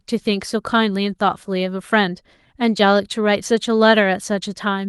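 No technical faults detected.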